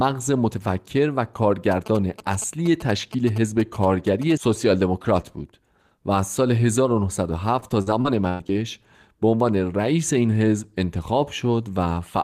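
From 1.72 to 4.32 s, a galloping dit-dit-dit of brief buzzes sits well beneath the speech, around 15 dB down. These are GSM signalling bursts: a nearby 2G phone was exchanging short radio bursts with its network, and the audio circuit rectified them into buzzes pulsing at about 217 Hz.

Between 7.59 and 8.57 s the speech turns choppy, with pieces audibly missing. This is repeated packet loss (robotic sound). Seven holes follow in quick succession, the longest 105 ms. Each is bridged by stretching the previous sound, so about 27% of that stretch is patched-over audio.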